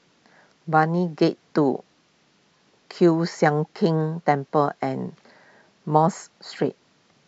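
A speech recording with no audible technical faults.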